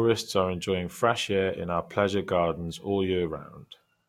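Nothing stood out on listening to this short piece of speech.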